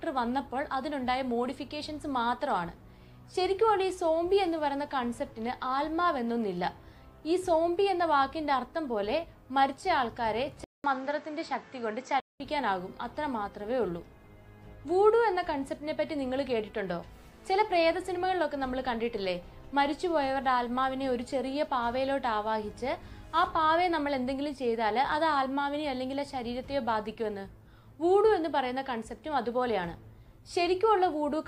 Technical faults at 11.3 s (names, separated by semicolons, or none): input switched to a poorer device